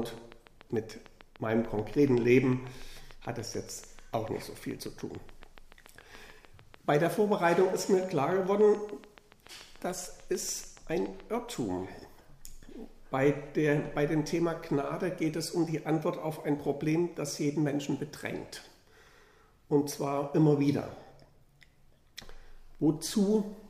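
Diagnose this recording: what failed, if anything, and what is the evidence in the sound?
Likely interference coupling into the analogue wiring, or a faulty connection or power supply, is injecting a regular pulse. The result is a train of clicks from 0.03 to 11.5 s: some seventy similar clicks at 6.89 per second, peaking roughly level with the audio and ticking through pauses too.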